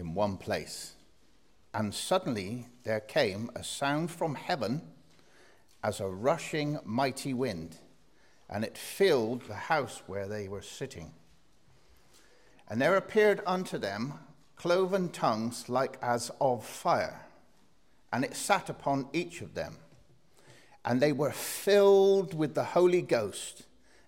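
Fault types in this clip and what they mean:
Nothing stood out on listening; no fault could be heard anywhere in the audio.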